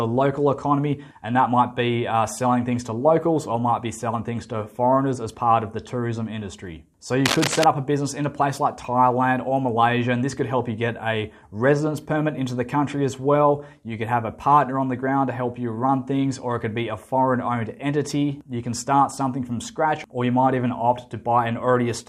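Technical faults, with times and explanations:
7.26–7.64 s, cable scratch noise: for about 0.38 s a dense, irregular scratching and rustling sits over the sound, roughly as loud as the sound itself, then stops. The likely cause is a worn cable, plug or control being moved, so that its contact resistance jumps about rapidly and pushes ragged bursts of noise into the signal. The bursts are uneven and closely packed, which is why they sound like scratching rather than clicks.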